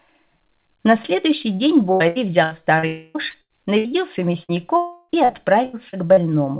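The audio arrives over a call link with nothing above 4 kHz, which fits narrowband G.711 A-law at 64 kbps, and it is broken up by a cluster of network losses. From 1.92 to 2.86 s and again from 5.25 to 6.20 s there is repeated packet loss, giving a robotic sound. Each stretch has four gaps of up to about 80 ms. The receiver keeps patching them by carrying the last sound forward, which fills roughly a quarter of each span. Because the holes recur, the result is choppy and robotic rather than a single break. At 2.87 to 3.18 s and 4.77 to 5.12 s, a continuous block of about 280 ms and then 320 ms never arrives, likely a long network dropout. It differs from a burst by its length. The concealment stretches across nearly the whole gap as a fading buzz or hiss with no true silence left, and the audio resumes with that portion gone. Short concealed packet loss at 3.30 to 3.37 s and 4.45 to 4.52 s removes only about 40 ms each time. 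That is brief enough to register as a small smear or wobble before the real signal blends back in. A burst of packet loss at 3.42 to 3.53 s and 3.78 to 3.88 s drops about 80 ms each time. That is long enough that the held sound fades toward a buzz or hiss before the audio picks up further on. A burst is a single isolated gap, unlike the chained gaps of the robotic stretches.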